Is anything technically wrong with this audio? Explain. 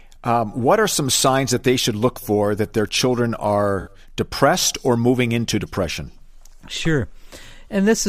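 Yes. AAC frame loss with concealment occurs from 3.80 to 3.91 s, between "for that their children" and "depressed or moving into". About 64 ms of coded audio is missing, which fits three lost frames. The decoder patches the gap from the last good spectrum, leaving a brief smeared, noisy, phasey stretch.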